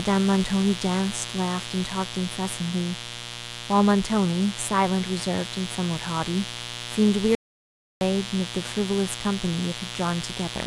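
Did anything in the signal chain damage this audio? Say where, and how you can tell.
Yes. There's a raspy mains buzz on 60 Hz under the whole clip, not far below the speech. Spiky switching harmonics leaking into the analogue wiring sound like an unshielded or dimmer-adjacent run.

An audio dropout to silence runs from 7.35 to 8.01 s, about 0.66 s of dead silence with no room tone, likely a momentary input or link loss while the recorder kept writing.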